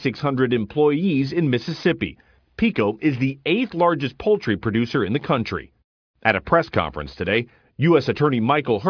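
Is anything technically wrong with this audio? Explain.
No, nothing technically wrong can be heard here.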